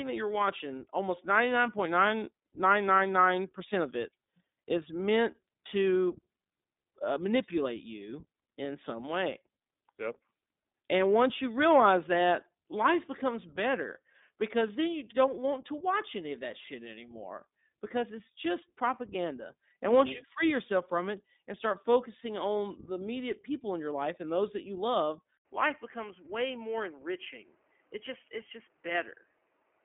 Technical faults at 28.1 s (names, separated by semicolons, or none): iLBC codec; input switched to a poorer device